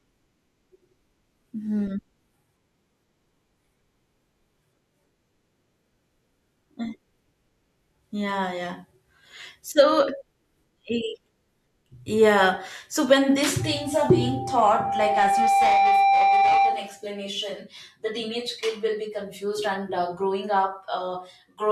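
Right after "when these", at about 13.60 s, a loudspeaker feedback squeal kicks in and hangs on until about 17.05 s. The microphone is hearing the speaker it feeds, and around 790 Hz the loop gain has crept past one, so that tone keeps feeding itself. You hear it swell over roughly two seconds into a steady whistle that ends up sitting a bit louder than the speech itself.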